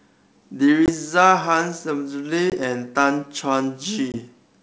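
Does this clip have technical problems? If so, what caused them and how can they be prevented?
Yes. Three short hard-edged silences appear at 0.86 to 0.90 s, 2.50 to 2.58 s and 4.12 to 4.19 s. This is packet loss on an ADPCM call, each gap matching about 20 ms, or a single lost packet. The tell, compared with a plain dropout, is what follows each hole. ADPCM codes only differences from a running prediction, so after missing data the receiver's predictor and step size disagree with the sender's. The speech returns at the wrong level or with a click and some distortion for a few tens of milliseconds before it realigns. The wideband G.722 coding carries the speech cleanly in between. Packet loss concealment together with a jitter buffer and a more reliable network path would prevent these gaps.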